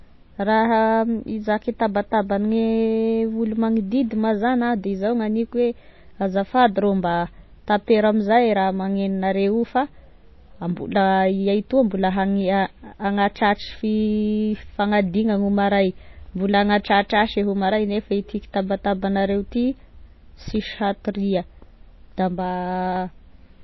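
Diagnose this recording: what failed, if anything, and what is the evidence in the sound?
MP3 compression, throughout the speech, at the codec stage. Nothing reaches above 5.8 kHz, and the damage is plainly audible as a watery, swirling texture that points to a bitrate around 24 kbps. Short of bits, the encoder likely cut the treble and let weak frequency lines flicker between frames.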